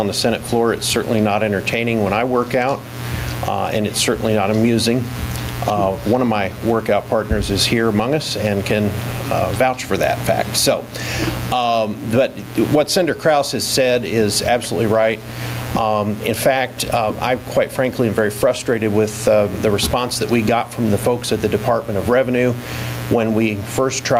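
Input gain is likely set far too high, so a fast limiter clamps every loud sound; throughout, the gain swings up and down by around 15 dB, pumping audibly.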